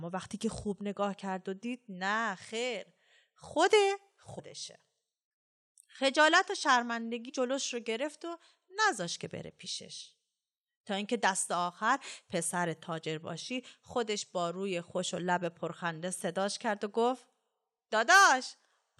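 Speech clip with damaged data in a compressed stream: corrupted bytes made the decoder misread frames, lose sync and hunt for the next header. The result is a brief blip at 4.38 s and again from 7.28 to 7.30 s.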